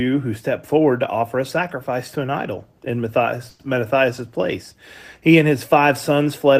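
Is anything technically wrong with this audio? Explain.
Yes. There is a call audio freeze in this speech from 3.49 to 3.61 s. The last sound is held and stretched into a brief buzz that fades, filling about 100 ms. Nothing drops to silence. The speech then picks up exactly where it stopped, so nothing is lost. Everything after it runs about 100 ms late. The likely cause is delayed packets draining the jitter buffer, so the receiver padded the gap until audio arrived.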